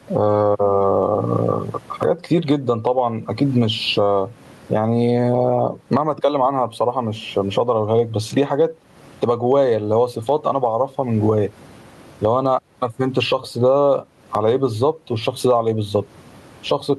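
Gain pumping runs through the whole of this speech recording. The background rises by around 20 dB in every pause and drops back under each loud syllable, leaving the speech squashed and even in level. The likely cause is gain set far too high with a fast limiter clamping each peak. The room noise, about 42 dB below the speech, is what swells. Unlike a noise gate, which cuts the gaps to silence, here the gaps get louder.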